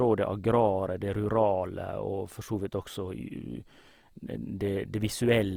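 A speech clip with plainly audible Opus compression damage from start to finish. The speech sounds rough and grainy, with noisy texture where there should be clean tone. Content still reaches about 20.4 kHz, and it all likely comes from Opus's CELT mode at a low bitrate around 24 kbps.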